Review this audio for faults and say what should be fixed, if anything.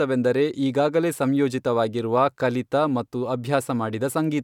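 Nothing in this speech audio needs fixing, as no faults are present.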